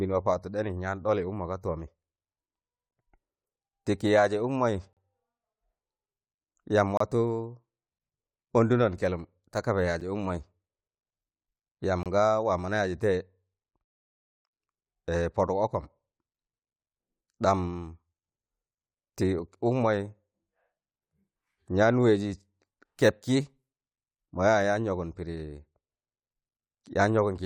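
Gaps between stream segments appear at 2.91 s, 4.93 to 4.97 s, 6.97 to 7.00 s, 10.00 s and 12.03 to 12.06 s. Where one-second segments join, their time stamps leave a small hole that the player pads with silence. Each sounds like a hard-edged dropout in the speech lasting from about 8 ms to about 39 ms. Nothing is missing from the audio itself; the silence is added time.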